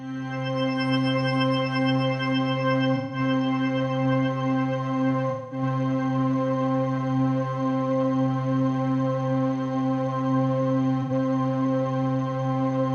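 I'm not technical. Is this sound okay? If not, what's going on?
No. Small chunks of the compressed audio went missing in delivery, an AAC frame loss with concealment, and the player patched each gap by guessing from the sound just before. You hear brief smeared, noisy patches at 2.95 to 3.19 s, 5.30 to 5.62 s and 11.02 to 11.11 s.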